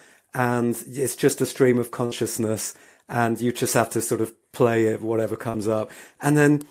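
At 2.05 to 2.13 s, a burst of packet loss: the receiver extends the last sound for about 60 ms, fading it, then resumes with that stretch of speech missing. At 5.49 to 5.55 s, short concealed packet loss: roughly 40 ms arrives too late, and the synthesized fill blends back in as a brief smear.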